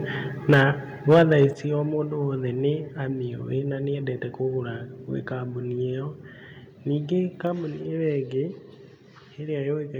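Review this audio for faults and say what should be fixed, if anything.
Microphone overload is audible in the speech from 0.49 to 0.63 s and again from 1.09 to 1.45 s, where the loudest syllables take on a harsh, crackling edge. The peaks push past the converter's ceiling by about 7 dB and about 6 dB, so their tops are flattened, most likely because the microphone's input volume is set too high. Unlike codec distortion, the crackle appears only on the peaks, not on quieter passages. To prevent it, lower the microphone's input level until peaks sit clearly below full scale.

Microphone volume stepped down is heard as a sudden drop in both voice and background at 0.54 s, by about 3 dB, and at 1.53 s, by about 7 dB. Each drop arrives during or just after an overloaded stretch, likely because the call software detected clipping and cut the device's input volume in one step. Unlike a smooth compressor or limiter, the drop is abrupt and the level stays down rather than recovering. 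To prevent it, disable automatic microphone gain adjustment in the call software once the input level is set correctly by hand.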